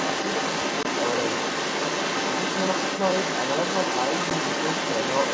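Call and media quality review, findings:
Second voice audible under the talker for the whole clip, about as loud as the main speech. This is other side's voice leaking through, likely from loudspeaker playback reaching the microphone that the echo canceller failed to remove.

Hard-edged silent gaps at 0.83–0.86 s (20 ms) and 4.30 s (10 ms), each followed by slightly distorted speech as it resumes. This is packet loss on an ADPCM call, with the first gap consistent with two lost packets and the second with one. The G.722 decoder's predictor and step size desynchronised from the sender's, then re-converged within tens of milliseconds.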